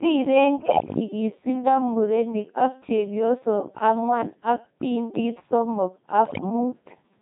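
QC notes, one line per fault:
Throughout: Codec 2 vocoder. The speech sounds robotic and buzzy, with heavy damage, because at about 2.4 kbit/s only pitch, voicing, energy and a rough spectral envelope survive. The decoder rebuilds the voice from a bank of sine waves instead of keeping the original waveform, so natural breathiness and texture are replaced by a synthetic hum, and anything beyond a single clean voice is smeared.
0.55–1.00 s and 6.26–6.50 s: bit errors on digital voice radio. Both stretches break into warbling, bleepy gibberish with sudden jumps in pitch, loudness and tone colour, and the later burst is the harsher of the two. Flipped bits reached the vocoder at roughly 7% and then around 15% error rates. Because each bit steers the pitch, level, voicing or spectrum of a whole frame, a corrupted frame comes out as a wrong synthetic sound rather than mere noise.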